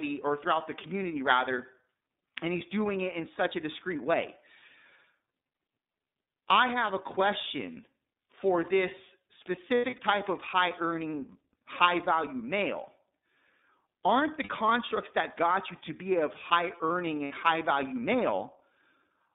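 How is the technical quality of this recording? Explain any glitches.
The recording is a narrowband speech clip with steady codec damage and three brief packet-loss gaps.

iLBC codec, throughout: the sound passes only about 250 Hz to 3.7 kHz and has a plainly rough, slightly synthetic edge. Each block is coded on its own, and the blocks point to 30 ms frames at 13.33 kbps. Plain band-limiting would sound muffled but clean, without this graininess.

Lost iLBC frames: from 9.75 to 9.99 s, between "a question for this" and "type of high earning", about 150 ms is lost, scattered over 240 ms, with the longest gap roughly a tenth of a second. Shorter 60 ms losses follow at 14.43 to 14.49 s, and at 17.25 to 17.32 s between "be of high earning" and "high value". Each 60 ms gap fits two 30 ms frames. In every gap the decoder repeats the last pitch cycle with added noise, so you hear a held, buzzy vowel rather than silence. 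The voice returns clean immediately, with none of the smeared recovery a codec that carries state between frames would leave.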